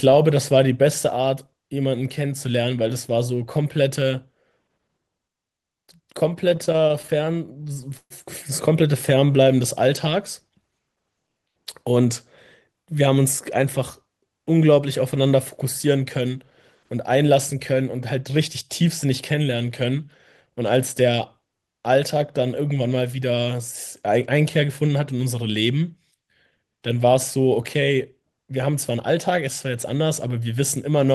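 From 6.49 to 8.12 s you get repeated stalls, a stutter: packets were showing up late or slower than playback, so the jitter buffer kept running dry, twenty times across that stretch. Each time, the receiver stretched out the last bit of sound to cover the hole, about 321 ms in all, roughly a fifth of the span, with the longest fill at 132 ms. Nothing's actually lost, but the speech drags and hiccups there.

Later, from 28.23 to 29.29 s, there's a jitter buffer speed-up. The buffer had built up more audio than it wants, so the receiver trimmed out tiny slices of one or a few pitch periods, over and over, around 70 ms' worth altogether. Playback runs about 7% fast while the pitch stays put, so the speech comes across a touch rushed for that second or so.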